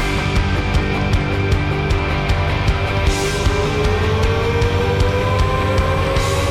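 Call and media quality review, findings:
No faults found in this call and media quality review.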